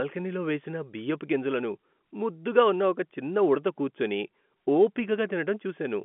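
Nothing goes wrong anywhere in this speech, which just comes through as an ordinary telephone call with its familiar narrow band of roughly 200 Hz to 3.4 kHz.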